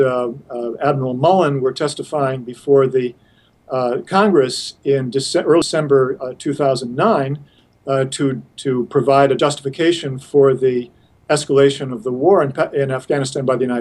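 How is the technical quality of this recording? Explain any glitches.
The recording has two brief dropouts from compressed frames skipped. At 5.62 s the audio jumps ahead about 150 ms, roughly five 32 ms frames, and at 9.39 s about one frame. The decoder never plays those frames, so the audio jumps straight past them.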